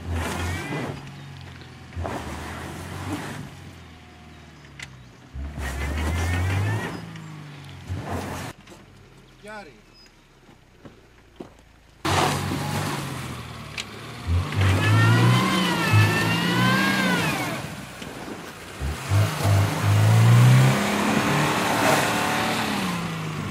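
No technical faults can be heard anywhere in the clip. Nothing in the audio calls for a timestamp or further comment.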